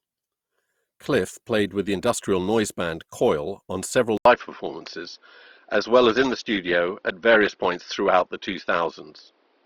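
At 4.17 s, right after "on several", the speech drops out for about 80 ms and returns duller and boxier for the rest of the clip. Nothing is left above 5.9 kHz, the level shifts by roughly 5 dB, and a faint new noise floor appears, roughly 45 dB under the speech. Together these point to the input likely having been switched to a poorer device, such as a different microphone or a headset call profile with a narrower band.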